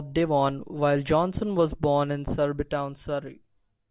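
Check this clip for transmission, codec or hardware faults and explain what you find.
No faults found in this recording.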